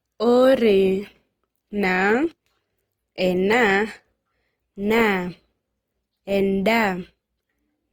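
Throughout the speech, the sound has a rough, grainy texture: voiced tones turn noisy and lose their smoothness, with the damage plainly audible. The top end stays open to about 20.3 kHz, so there is no muffling. This points to Opus compression, likely in its CELT music mode at a low rate near 24 kbps, where starved bands are refilled with folded or noise content rather than left empty.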